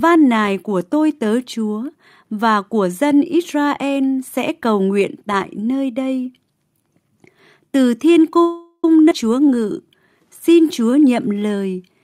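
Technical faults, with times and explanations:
8.42–8.85 s, call audio freeze: after "từ thiên" the sound hangs as a fading buzz, ending in about 50 ms of silence, likely from delayed packets draining the jitter buffer; 0.41 s inserted, nothing lost.
9.1 s, skip ahead: playback jumps forward, dropping roughly 150 ms of speech, with the two sides joined almost directly by a 12 ms fill.
9.35–9.87 s and 10.48–11.40 s, jitter buffer slow-down: speech is stretched to 88% and 91% speed at unchanged pitch, adding 70 ms and 88 ms by repeating pitch periods to rebuild buffer reserve.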